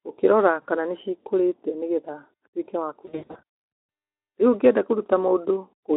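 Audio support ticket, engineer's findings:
VoIP packet loss concealed by the speech codec, 0.61–0.67 s, just before "kana nĩcikũrĩte". A brief buzzy smear, consistent with about two 20 ms frames lost and extrapolated from the last pitch and filter. Spectrogram shows flat repeated harmonics, and the waveform a short decaying envelope.

Same fault, 3.05–3.41 s. Losses scattered across roughly 440 ms, worst gap 80 ms. Sound goes weak and tonal, then recovers slowly. Spectrogram shows striped, smeared harmonics. Waveform has sagging, fading stretches. Light Speex colouring at 15 kbps underneath.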